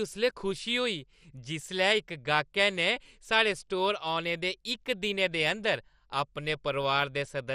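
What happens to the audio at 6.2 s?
MP2 compression is audible at 6.2 s, as it is across the whole clip, and the damage is plain. The speech is most likely passed through an MPEG Layer II encoder that splits it into 32 sub-bands and runs short of bits, switching upper bands off and coarsely quantising the rest, which fits a rate around 64 kbps. Nothing survives above 14.3 kHz, so the speech sounds dull, with a gurgling, granular texture.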